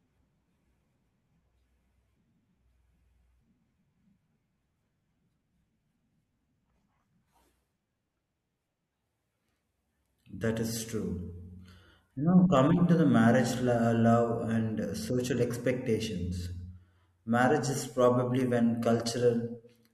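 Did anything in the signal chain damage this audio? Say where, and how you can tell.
Yes. Two bit error spikes, at 12.57 s and 18.41 s, point to corruption in the digital path, in memory, storage or a digital link. Each is a lone sharp tick, peaking at about -23 dBFS and about -29 dBFS, with flat broadband energy that has no connection to the surrounding speech. Their brevity fits one or two corrupted samples. A flipped bit throws the sample value off by a power of two, and the next clean sample snaps it straight back.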